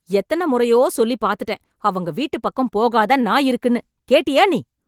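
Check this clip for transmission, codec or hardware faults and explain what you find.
The speech comes through Opus voice compression running in its fullband hybrid mode, with content reaching up to about 20.2 kHz and only light coding texture, which fits a bitrate of around 20 kbps, and nothing in the signal points to a transmission, codec or hardware fault.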